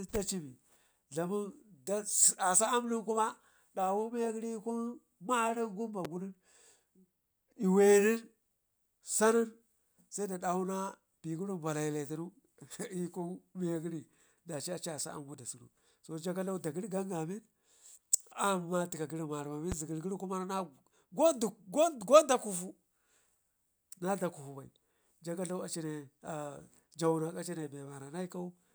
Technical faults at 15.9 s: none

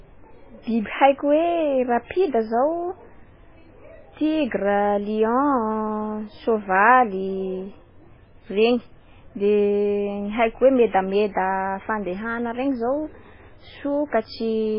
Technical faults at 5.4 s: MP3 compression

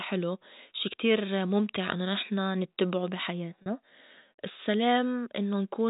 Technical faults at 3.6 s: packet loss with pitch repetition

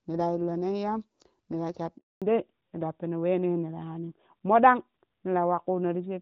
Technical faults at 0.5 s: none

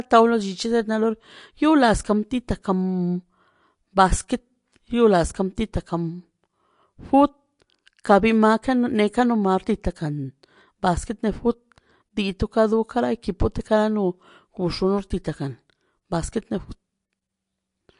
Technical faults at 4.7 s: MP3 compression

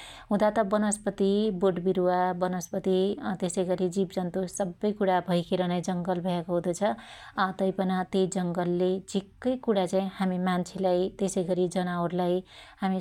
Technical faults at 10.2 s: none

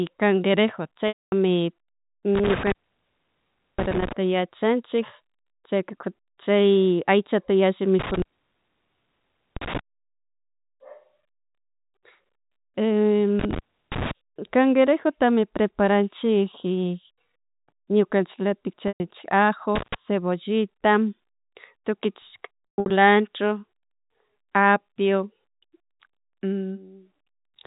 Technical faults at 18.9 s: packet loss with pitch repetition

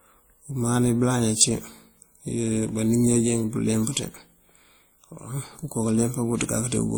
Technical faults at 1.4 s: transcoding between lossy codecs

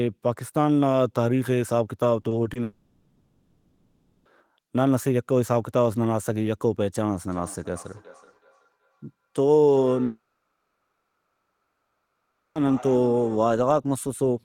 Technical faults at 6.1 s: none

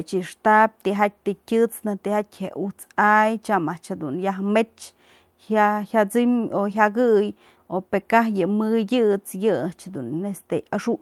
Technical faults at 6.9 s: none

